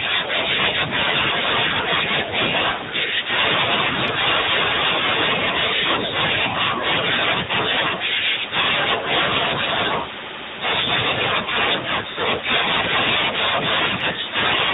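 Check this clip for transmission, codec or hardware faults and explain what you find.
Two faults are present: the speech has gone through a narrowband mobile codec for its whole length, and three brief glitches come from lost speech frames.

AMR narrowband mobile codec: Throughout, nothing above 4 kHz survives. The voice has a buzzy, plainly synthetic edge, which fits AMR-NB at a mid-range mode around 10.2 kbps. The encoder rebuilds the voice from a vocal-tract model fed by a few pulses per sub-frame, so detail is replaced by that texture. A simple low-pass filter would only dull the sound. It would not add this coarse, artificial grain.

Lost AMR speech frames: Short disturbances occur at 1.96–1.99 s, 8.20–8.23 s and 12.12–12.15 s. Each fits a single lost 20 ms frame. The decoder covered each gap by reusing the previous pitch and vocal-tract settings at reduced gain, so the sound briefly smears into a dip or warble rather than stopping. 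Unlike a packet dropout, there is no hard silence or click. The gaps are too short to fade out fully.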